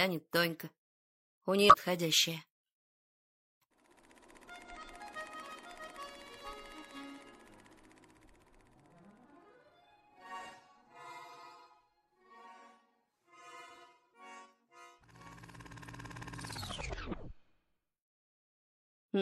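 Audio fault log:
1.68–1.76 s, 4.65 s and 15.05–15.10 s: damaged data in a compressed stream. Corrupted bytes make the decoder misread or reject frames and lose sync while it hunts for the next frame header, giving brief chirps or blips lasting up to about 80 ms.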